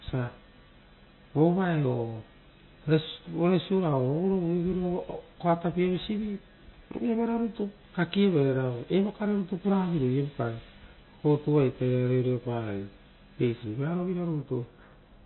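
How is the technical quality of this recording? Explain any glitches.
Not great: the speech has clearly audible codec damage from start to finish. MP3 compression is the likely cause. Everything above about 4.1 kHz is gone, so s sounds lose their edge, and the rest turns watery and swirly. At a very low bitrate, around 23 kbps, the encoder cuts the treble and lets weak frequency components flicker on and off between frames.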